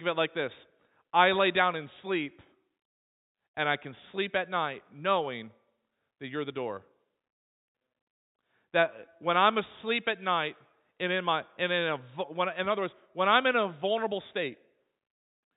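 Nothing goes wrong anywhere in this speech, which comes through ordinary G.711 telephone coding, so nothing above 4 kHz is there, just as on any landline call.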